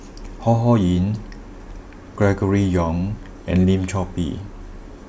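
Nothing stood out as a technical fault on listening to this speech recording.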